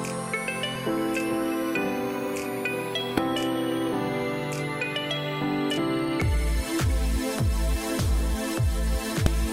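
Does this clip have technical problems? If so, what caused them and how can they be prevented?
Yes. Damaged data in a compressed stream causes brief glitches at 0.72 to 0.76 s, 3.15 to 3.19 s, 5.78 s and 9.26 s. Corrupted bytes make the decoder misread frames. It loses sync until the next header. Checksummed, error-checked transfers prevent this.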